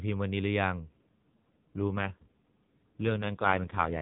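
At 0.83 s an AMR rate drop sets in and lasts to the end: the mobile link switches the narrowband codec down a mode, which fits a cut from 12.2 to 5.9 kbps. With fewer bits for each 20 ms frame, the speech turns buzzier and more synthetic, with no gap, while the band stays capped at 4 kHz.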